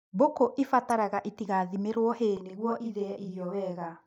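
At 0.90 s, damaged data in the compressed stream makes the decoder lose frame sync, leaving a brief chirp, click or short hole just before "itigathimĩrwo hay". From 2.37 s to the end, after "itigathimĩrwo hay", a channel delay (doubling) holds one channel 40 ms late before the mono sum, so the speech is heard twice, as a close slap.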